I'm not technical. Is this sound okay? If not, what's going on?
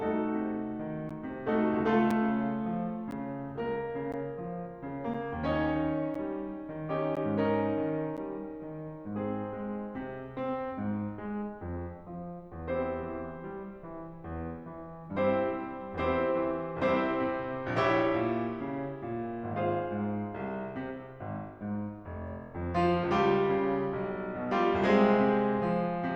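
No. The music briefly drops out at 1.09, 2.11, 3.11, 4.12, 5.14, 6.14, 7.15 and 8.17 seconds. Each is a gap between stream segments. The music arrives in one-second pieces that don't quite join, so silence lasting 5 to 14 milliseconds fills each join.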